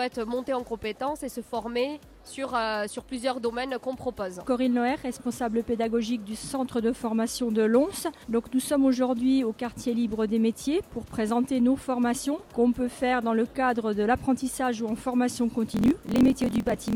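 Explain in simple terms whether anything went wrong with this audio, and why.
Near the end, from 15.67 s to the last moment of the clip, there is a block size mismatch (truncated). One stage hands over chunks of audio longer than the next stage takes in, so the tail of every chunk is thrown away. That leaves a steady buzz at about 43 Hz, which fits a 1024-sample read. The sound also hurries along about 1.12 times faster, while its pitch stays roughly normal.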